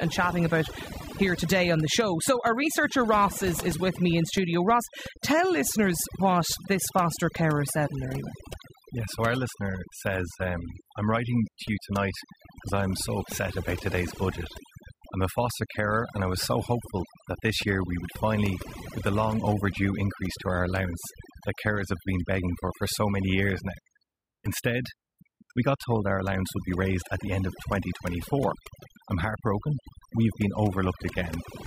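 From start to finish the speech carries overdone noise removal: a noise reduction stage pushed far too hard, cutting individual frequency bands down or out whenever they sit close to its noise estimate, and taking the quieter parts of the voice along with them. The background falls to near silence broken by twinkling specks. On a spectrogram the floor shows as dark gaps dotted with isolated bright flecks.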